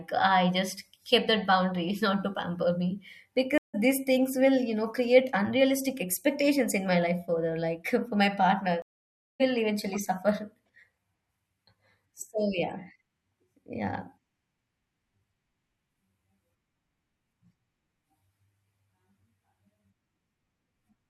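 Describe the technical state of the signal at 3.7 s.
A stream reconnect: the connection dropped after "not to pamper me", leaving 0.16 s of silence (3.58–3.75 s). A fresh decoder then resumes about a tenth of a second later, at "these things will you".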